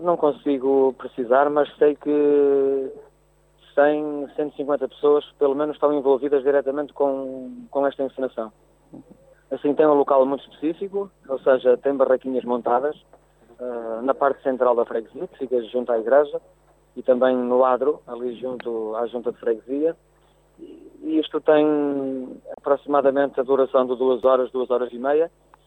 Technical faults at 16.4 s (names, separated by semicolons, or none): none